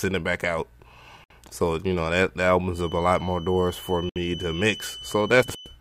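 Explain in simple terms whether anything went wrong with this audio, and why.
Two things went wrong.

The audio was encoded in separate pieces and then stuck together without trimming the bit of silent padding each piece carries at its edges. That leaves a gap at a join of encoded pieces at 1.24 s and again at 4.09 s: the sound suddenly drops out for about 61 and 65 milliseconds, then picks up exactly where it stopped.

A loudspeaker was likely leaking back into the microphone, holding the loop just short of a full howl. The result is a feedback whistle: from 2.69 s to the end, a thin, steady tone at 3 kHz rings behind the sound, slowly swelling and fading in loudness without growing.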